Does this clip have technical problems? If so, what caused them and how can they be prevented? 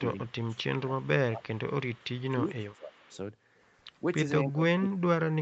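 Yes. Speech suppressed in double talk occurs at 0.0–0.57, 0.86–2.15, 2.33–3.05 and 4.03–4.19 s, and from 4.45 s to the end. The sound dips by about 20 dB, only about 5 dB at 4.03 s, and about 40 dB in the final stretch. On a waveform the envelope collapses in chunks, and a spectrogram shows the energy thinning out. The likely cause is an echo canceller that couldn't tell the near talker from loudspeaker echo while both sides spoke, so it turned everything down. Headsets, or a canceller with better double-talk detection, prevent this.

Echo leak appears at 0.26–0.8, 2.0–2.04 and 2.73–3.17 s. It is a faint copy delayed by 281 ms, about 35 dB below the speech, visible as a weak shifted repeat of the spectrogram pattern. It is likely loudspeaker pickup that the far end's canceller left behind. Lower speaker volume, headsets or better acoustic echo cancellation prevent it.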